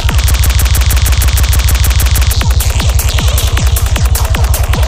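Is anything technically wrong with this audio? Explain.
Yes. From 0.31 to 2.33 s there is a broken-record loop. A 156 ms fragment repeats 13 times back to back, identically, and the audio meant for that span is lost. The likely cause is a stalled player, encoder or stream resending its last fragment. Unlike an echo, the repeats never fade or overlap.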